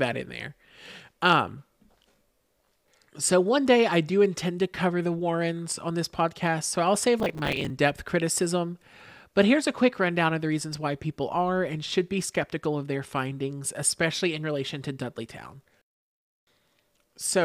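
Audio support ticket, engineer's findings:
Processor overload crackle, 2.04–2.91 s: CPU repeatedly missing audio buffer deadlines. Each late buffer is filled with stale audio that has hard edges, heard as gritty tearing over the speech. Spacing fits buffers of around 10 ms.

Processor overload crackle, 7.20–7.70 s: same mechanism during a shorter load spike. Many missed buffers in a row give a brief crackling burst that stops cleanly once the load clears.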